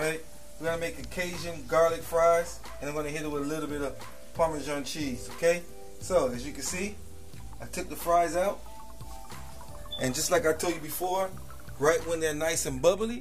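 A DC offset runs through the whole clip, from start to finish. The waveform sits shifted off the zero line by a constant amount, at about -41 dBFS. Being a fixed displacement rather than a changing signal, it adds nothing audible. Its traces are a steady component at 0 Hz at the very bottom of the spectrum and a small loss of headroom, since the shifted waveform reaches full scale sooner on one side than on the other.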